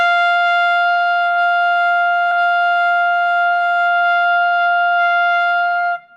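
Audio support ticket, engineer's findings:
Stream segment repeated at 2.31 to 3.31 s. One second of sound plays twice, with a small blip at the jump back. The likely cause is the player fetching or queuing the same segment again. A stutter loops a fraction of a second; this repeats a whole segment.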